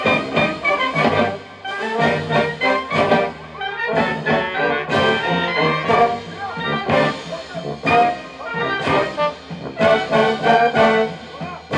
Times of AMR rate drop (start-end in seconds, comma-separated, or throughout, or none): none